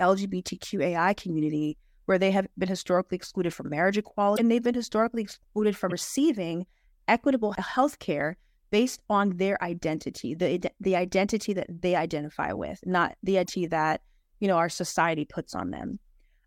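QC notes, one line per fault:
4.35–4.40 s, 5.89–5.92 s, 13.44–13.50 s: broken MP3 bit reservoir. Short glitches follow "historically excluded from marriage", "they've been historically excluded" and "identify with not the". The speech jumps ahead. Dropped frames likely left the next 26.1 ms frames decoding borrowed bits from the wrong data.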